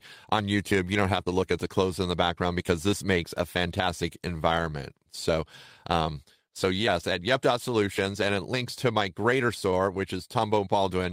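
No technical faults can be heard in this speech recording.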